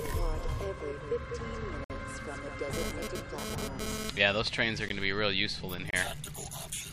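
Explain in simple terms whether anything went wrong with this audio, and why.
Three short silences break into the sound. Each is a gap between stream segments. The audio arrives in one-second pieces, and at some joins the timing leaves a hole. The player fills it with silence. You hear a sudden dropout at 1.84 to 1.90 s, 4.89 s, and 5.91 to 5.93 s. Nothing is actually lost.

From 2.73 to 4.10 s there is GSM phone buzz. A nearby 2G phone sends radio bursts about 217 times a second, and the audio circuit picks them up. It sounds like a raspy buzz that comes and goes while the phone transfers data. It is nearly as loud as the sound itself.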